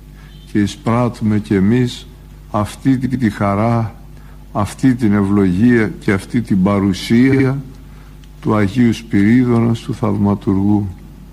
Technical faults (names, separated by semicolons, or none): repeated frames